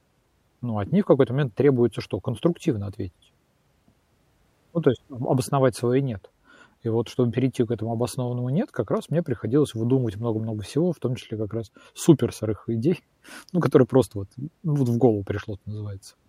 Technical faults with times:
none

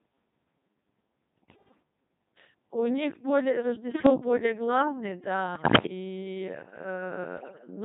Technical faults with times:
0.00-7.85 Codec 2 vocoder
1.36-1.82 bit errors on digital voice radio
3.91-4.09 bit errors on digital voice radio
5.55-5.85 bit errors on digital voice radio
7.37-7.67 bit errors on digital voice radio

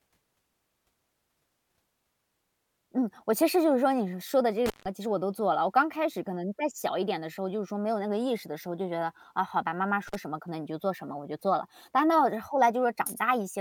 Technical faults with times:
4.66-4.86 intermittent contact
10.07-10.15 intermittent contact

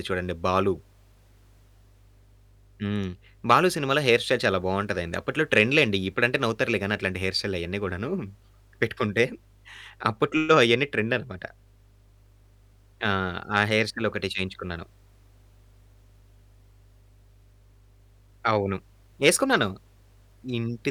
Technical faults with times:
0.00-20.91 mains hum

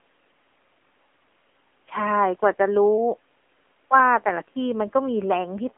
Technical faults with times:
0.00-5.78 AMR narrowband mobile codec

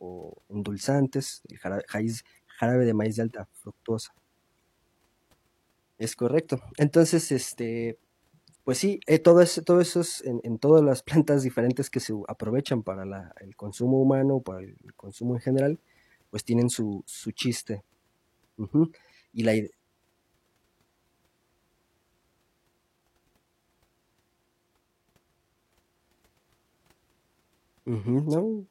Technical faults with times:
8.55 compressed frames skipped

